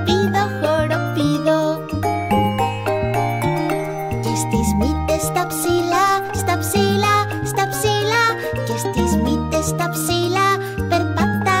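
From start to finish there's a steady 50 Hz buzz riding on the sound, and it's the resampler restarting on every block. The conversion from 48 kHz down to 44.1 kHz was done on 20 ms chunks in isolation, so at each chunk boundary the filter had no real neighbouring samples to work with and left a small error. Those errors repeat fifty times a second, close enough together to fuse into a buzz, and it only shows up where there's signal underneath.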